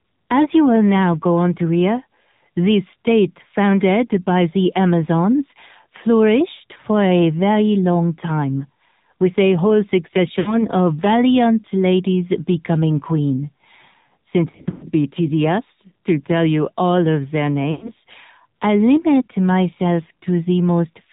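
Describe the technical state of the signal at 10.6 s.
At 10.6 s, lost AMR speech frames: from 10.40 to 10.63 s about 60 ms of speech failed its checksum after radio errors, which fits three consecutive 20 ms frames. The decoder filled the gap by repeating its last good pitch and vocal tract settings at falling gain, so the sound smears, thins and fades before recovering slightly rough.

Underlying this is the AMR narrowband mobile codec. Its low-rate mode, consistent with 7.4 kbps, models speech with few pulses, leaving a plainly audible buzzy, synthetic tone and no content above 4 kHz.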